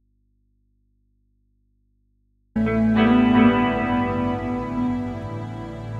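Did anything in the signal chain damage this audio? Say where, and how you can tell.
Yes. From the very start until about 2.56 s the music is gone and all that's left is mains hum sitting roughly 45 dB below the programme level. Then the signal snaps back in abruptly, with no fade. That's an audio dropout to a faint residue, and the stage is most likely the analogue wiring: a connection open or intermittent at the input, so the path stays live and picks up hum instead of the music.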